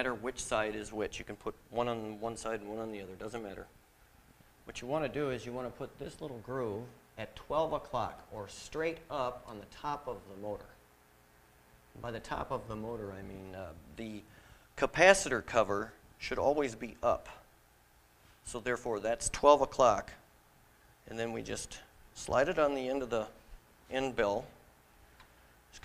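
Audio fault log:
No fault is heard anywhere in the clip. Nothing in the sound needs a time or a cause set against it.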